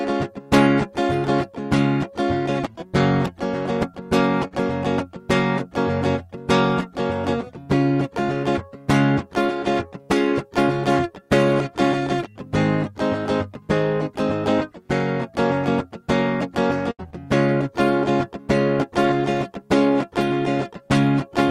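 At 4.47 to 4.53 s there is a short concealed packet loss in the music. About 40 ms of audio never arrived in time. The receiver covered 32 ms by extending the last sound, then blended back into the real signal. It comes across as a brief smear in the music.

At 16.91 to 17.01 s a burst of packet loss follows. About 80 ms went missing in a row. For 75 ms the receiver kept the previous sound going while fading it down. The music then jumps ahead, and that stretch is simply absent.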